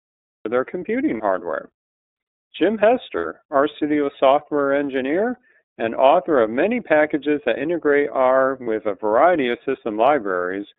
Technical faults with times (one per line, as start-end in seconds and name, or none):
0.00-10.79 iLBC codec
0.00-0.46 cut-off start
1.17-1.21 lost iLBC frames
3.17-3.25 lost iLBC frames
8.63-8.67 lost iLBC frames